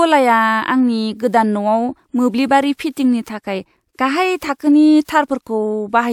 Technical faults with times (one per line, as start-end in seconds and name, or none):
none